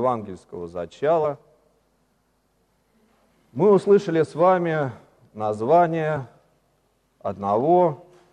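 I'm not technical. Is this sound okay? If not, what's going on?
No. This is damaged data in a compressed stream: part of the stored file got corrupted, so the player briefly lost its place and scrambled to recover. You hear it as short chirps or blips at 1.23, 3.83, and 6.16 to 6.18 seconds.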